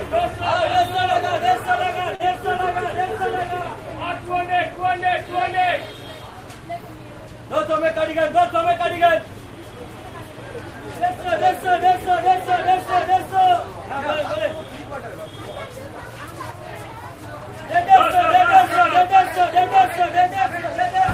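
A recording of sounds with two jitter-buffer faults. At 2.15 to 2.22 s, a short stall from a late packet: a packet missed its slot, the buffer ran dry, and the receiver stretched the last sound by 42 ms before resuming in place, so nothing is lost but the sound hangs briefly, adding 42 ms of delay. From 7.49 to 8.09 s comes a jitter buffer speed-up: with too much audio queued, the receiver trimmed small pitch-period slices repeatedly, removing about 50 ms. The sound plays at 107% speed with unchanged pitch and comes across as rushed.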